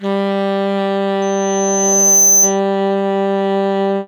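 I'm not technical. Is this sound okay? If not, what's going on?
No. From 1.22 to 2.60 s there is loudspeaker feedback squeal: a microphone is picking up the loudspeaker it feeds, and the sound goes round that loop, getting louder each pass. One high pitch, around 6.2 kHz, wins out. You hear it swell over about a second into a thin, piercing whistle that ends up louder than the rest of the audio, then it stops at 2.60 s.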